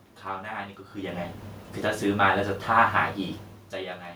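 No technical faults are audible.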